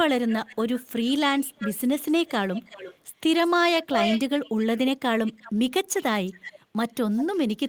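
A delayed second copy of the speech trails it at 0.26–0.85, 1.39–2.97, 3.44–3.51, 3.84–4.78, 5.26–5.52, 6.0–6.6 and 7.17–7.38 s. It is mostly well below the speech but nearly as loud at 3.84–4.78 s, and barely audible at 3.44 s. This echo leak likely comes from a loudspeaker at the far end whose echo canceller let its microphone pickup return. The lag creeps from 345 to 364 ms.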